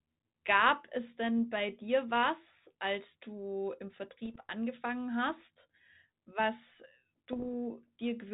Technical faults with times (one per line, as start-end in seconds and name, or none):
4.25-4.46 bit errors on an ADPCM link
7.33-7.46 bit errors on an ADPCM link